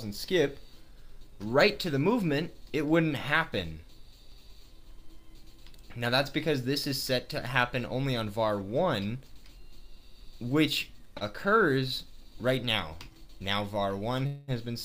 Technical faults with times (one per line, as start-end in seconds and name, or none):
11.17-11.23 short stall from a late packet
14.26-14.51 call audio freeze